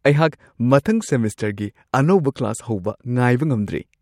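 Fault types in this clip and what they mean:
Nothing to list here, as there's no fault to be heard anywhere in this bit of speech.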